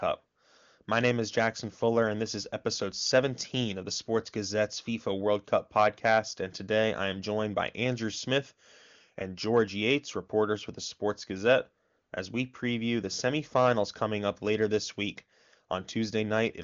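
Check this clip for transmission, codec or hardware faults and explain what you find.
Nothing wrong turns up here: the speech comes through the AMR wideband (HD Voice) codec with only faint coding texture at most, and the top end stops at about 7.2 kHz as that codec path normally would.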